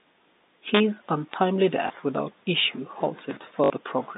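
A speech recording over a G.711 telephone line, band-limited to roughly 200 Hz to 3.7 kHz, carries three kinds of fault. Integer overflow at 0.75 to 0.80 s and at 1.34 s, where peaks overshoot by about 2 dB and about 1 dB, flips the waveform to the opposite extreme, giving cracks far harsher than the flattened buzz of clipping. At 1.56 s and 3.31 s a small jump with no gap marks a dropped buffer, likely an overrun, losing a few milliseconds. A dropout would leave silence instead. The small blip at 1.88 to 1.90 s (20 ms) and the robotic stutter at 3.64 to 3.70 s (60 ms) are packet loss with the last packet repeated. The longer run buzzes at 50 Hz, which fits three 20 ms packets replayed, and the sound repeats rather than skipping ahead.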